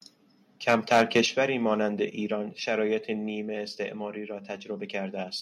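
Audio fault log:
0.68–1.2 s, microphone overload: the loudest peaks go flat-topped and crackly, running about 6 dB past the limit, likely an input set too hot for the converter, clipping a few percent of samples.
1.26 s, 2.28 s, 3.3 s, microphone volume stepped down: the speech and background drop together in sudden steps of about 6, 3 and 2 dB, likely the call software pulling the input gain back after that overload.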